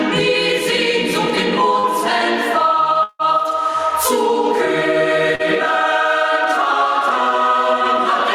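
The level of the audio breathes throughout, a sign of gain pumping: loud and soft parts are squashed closer in level, with a swing of roughly 10 dB. The likely cause is input gain set far too high and a fast limiter clamping it down on every peak. On a waveform the envelope looks flattened, with loud and quiet passages pressed to similar heights and the noise floor bulging up between events. A spectrogram shows the background band brightening and darkening opposite to the foreground. Two brief glitches are short concealed packet loss, from 1.79 to 1.86 s and from 5.35 to 5.42 s, each about 40 ms of audio that arrived too late to decode. The receiver patched each hole by extending the preceding sound, which comes across as a quick smear or wobble. On a spectrogram each patch appears as a short stretch of smoothed, repeated texture where fine detail stops changing, and the waveform shows slightly too regular cycles before the real signal blends back in. 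Between 3.03 and 3.22 s there is a longer gap, most likely a network dropout, with about 160 ms missing. Almost all of it is filled by the earlier sound stretched into a fading buzz, leaving around 30 ms of near-silence before the audio resumes further on, without the lost part. The waveform tapers to a flat line, and the spectrogram shows a decaying smear ending in a dark band.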